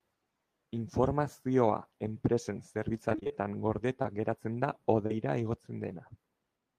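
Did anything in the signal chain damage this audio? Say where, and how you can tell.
Yes, the network stage damaged this speech. From 3.09 to 3.43 s there is repeated packet loss (robotic sound): six separate holes, none longer than about 21 ms, with roughly 120 ms missing in all. The receiver patched each hole by extending the last sound, so nearly half of that third of a second is synthetic fill. The speech turns choppy, with pieces dropping out in quick succession.

Two isolated dropouts are short concealed packet loss. At 4.02 s about 20 ms never arrived in time, and at 5.06 to 5.12 s about 40 ms was lost. In both places the decoder carried the preceding sound forward and then blended back into the real signal. Each one is heard as a brief smear or wobble in the speech. A short consonant falling inside the 40 ms gap could be lost entirely.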